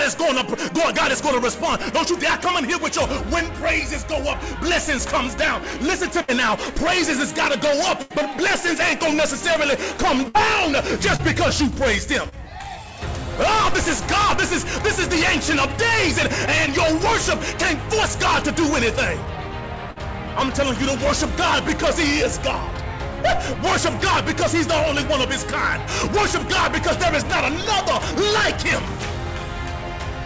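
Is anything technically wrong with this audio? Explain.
Yes. There are two kinds of packet-loss fault, heard over a call path whose audio stops at 8 kHz, which fits a G.722 codec at 64 kbps.

Burst of packet loss at 6.22–6.30 s, 8.02–8.12 s, 10.28–10.36 s and 19.91–19.98 s. Several packets in a row failed to arrive in time, about 60 ms of audio at each point and 80 ms at 8.02 s. The receiver stretched the last sound it had and faded it out, so each gap is heard as a brief held buzz or dying hiss. The sound then picks up further along, with that stretch simply gone.

Short concealed packet loss at 11.16–11.21 s, 12.29–12.34 s and 16.66–16.69 s. Each time about 20 ms of audio never reached the decoder. The receiver filled the hole by extrapolating from what came just before, as a pitched continuation or as shaped noise, and then crossfaded back into the real signal. These are much shorter than the bursts and come across as a quick smear or wobble, and a brief sound can drop out entirely.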